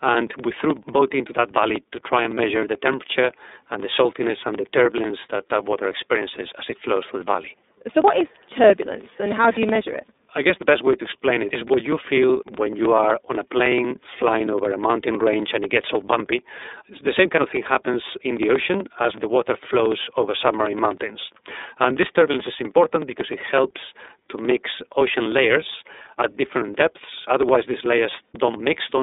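Speech running through the iLBC codec the whole way, and the coding damage is plainly audible: a rough, slightly synthetic edge from each frame's excitation being coded on its own. The band is narrow, roughly 250 Hz to 3.7 kHz, with nothing above 3.8 kHz, and the roughness fits the 13.33 kbps mode with 30 ms frames.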